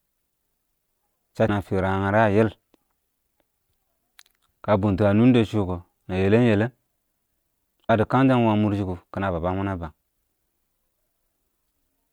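Speech, broken twice by damaged data in a compressed stream, at 1.45–1.49 s and 7.86–7.90 s. Corrupted bytes make the decoder misread those frames and lose sync, giving a brief glitch. Each shows as a 40 ms disturbance on a spectrogram and in the waveform.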